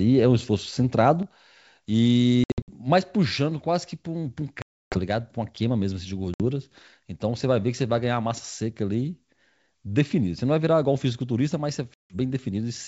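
At 1.23 s the level drops abruptly by about 6 dB and stays down to the end. That's one channel dropping out, most likely one side of a stereo feed lost before the mono sum. Anything common to both sides is halved, and anything only on the lost side is gone.

Then comes packet loss on an ADPCM call, four times:
2.44–2.71 s, 180 ms lost in scattered gaps, longest 60 ms
4.62–4.98 s, 300 ms, around fifteen packets
6.34–6.43 s, 60 ms
11.94–12.16 s, 160 ms

Each is a hard-edged silent hole. The sound comes back slightly distorted, because the decoder's predictor and step size have drifted from the sender's. It settles within tens of milliseconds. Underneath, the 64 kbit/s G.722 wideband coding shows at most faint damage.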